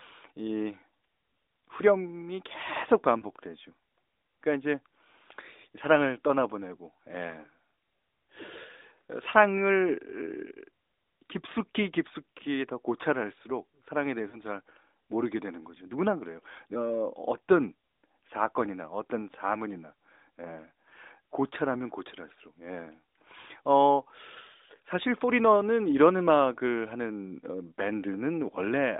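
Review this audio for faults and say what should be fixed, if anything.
Lost AMR speech frames at 3.20–3.25 s and 14.30–14.38 s, each one 20 ms frame: the decoder filled the gap by repeating the previous pitch and vocal-tract settings at lowered gain. The result is a brief dip or warble rather than the hard silence or click of a plain dropout. A stronger radio link or better channel error protection would prevent the checksum failures behind it.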